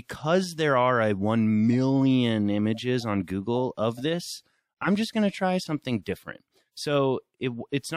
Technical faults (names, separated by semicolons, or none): none